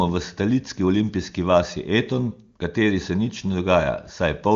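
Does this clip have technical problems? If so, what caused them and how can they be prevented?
No, this speech clip has no technical problems.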